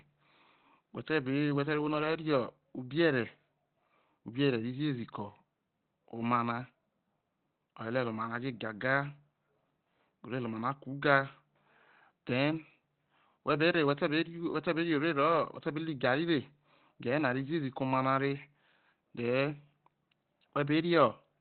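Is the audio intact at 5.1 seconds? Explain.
No. At 5.1 seconds, as throughout the speech, Opus compression is plainly audible: nothing remains above about 4.3 kHz, and the sound is muffled and hoarse. This is likely the narrowband speech (SILK) mode, which fits a bitrate near 16 kbps.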